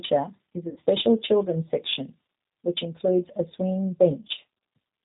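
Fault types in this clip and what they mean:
G.729 codec: A low-rate speech model, fitting 8 kbit/s, rebuilds the sound. Nothing above 4 kHz passes, and it sounds plainly rough and synthetic throughout.
VoIP packet loss concealed by the speech codec: About 60 ms goes missing after "is a". The decoder stretches the last sound into a fading buzzy tone or coloured noise before "children's section which includes".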